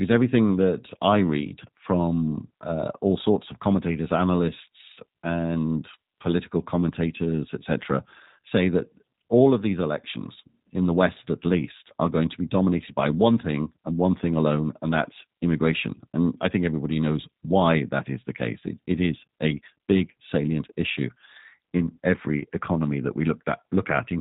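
From the first second to the end, the speech carries the sound of the G.729 codec, and the damage is plainly audible. Everything above 4 kHz is gone, so the voice sounds boxed-in and telephone-like. Each 10 ms frame is rebuilt from a vocal tract filter, a pitch predictor and a handful of pulses rather than the real waveform, which gives it that rough, slightly synthetic edge, the kind you'd expect from an 8 kbit/s G.729A stream.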